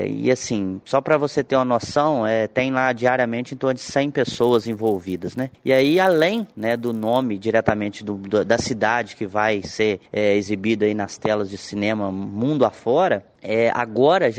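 From 4.33 to 7.22 s, a resampler restarted on every 10 ms block leaves edge errors: a 100 Hz buzz, shown as vertical spectrogram lines.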